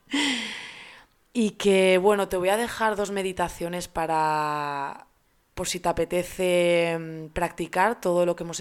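Nothing in this speech recording calls for comment, since no technical faults turn up anywhere along the way.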